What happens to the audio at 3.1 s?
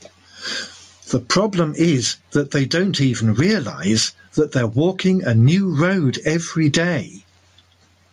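At 3.1 s, as across the whole clip, there is gain pumping: the gain ducks by roughly 15 dB under each loud speech sound, squashing loud and soft parts closer together, likely from a limiter fighting excessive mic gain. Unlike a noise gate, pumping lifts the gaps rather than silencing them.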